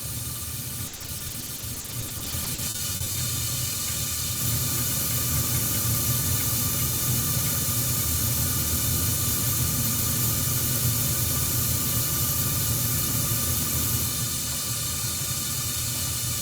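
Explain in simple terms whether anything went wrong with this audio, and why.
Repeated packet loss (robotic sound) affects the audio from 0.87 to 3.16 s. Over those two-odd seconds, chunks of the sound data arrived too late or not at all, close to thirty times, each gap no longer than 60 ms. To hide each hole, the playback stretched the last bit of sound it had, about 710 ms of patching in all, while roughly 580 ms of real sound never played. That is why this stretch sounds choppy, with pieces missing.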